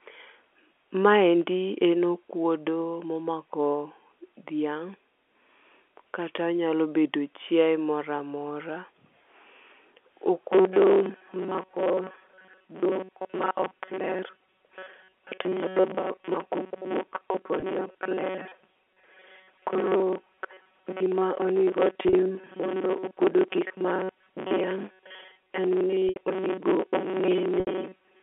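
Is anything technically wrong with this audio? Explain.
Yes. From 10.53 s to the end, the speech turns into a rigid, metallic buzz fixed near 188 Hz. This is robotic sound from repeated short buffers, likely caused by a starved buffer repeating about 5.3 ms chunks, with most of the real audio skipped. It lasts throughout, unlike the brief losses. Packet loss with pitch repetition occurs at 17.6 s (20 ms), 22.09 s (40 ms), 26.09 s (70 ms) and 27.6 s (70 ms). The last pitch period is held and faded, so the shorter gaps sound like a held note and the 70 ms ones fade toward silence before a cross-fade. The narrow 250 Hz to 3.4 kHz telephone band comes from G.711 telephone coding.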